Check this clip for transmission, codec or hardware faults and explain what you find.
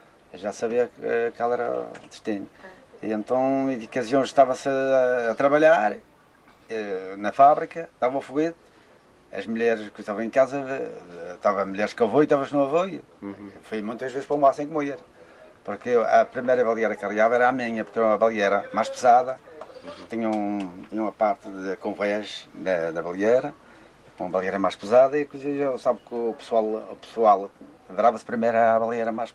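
No transmission, codec or hardware problems can be heard.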